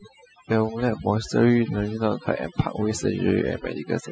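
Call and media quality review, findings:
Background drops and breaks up into twinkling specks throughout. Overdone noise removal: suppressor set too aggressive, muting individual frequency bands near its noise estimate and stripping quieter speech components along with the noise. Component: noise reduction stage.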